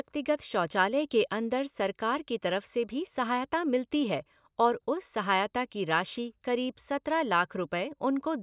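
Nothing goes wrong anywhere in this recording, so there's no fault to point to at any moment.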